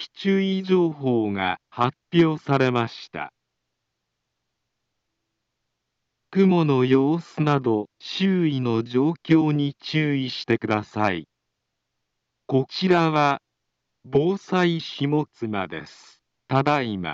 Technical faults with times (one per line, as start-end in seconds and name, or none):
6.50 damaged data in a compressed stream
14.14 damaged data in a compressed stream